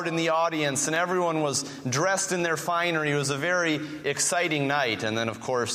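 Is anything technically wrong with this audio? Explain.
Yes, there are clock drift buffer slips from 0.96 to 5.27 s: a regular click about every 1.44 s, likely two unsynced clocks roughly 100 ppm apart, each dropping or repeating a few samples.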